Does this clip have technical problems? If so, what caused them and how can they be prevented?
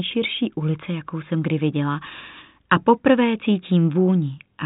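No, the speech arrives intact as telephone-band audio through G.726 ADPCM at 40 kbit/s, with nothing above about 3.8 kHz.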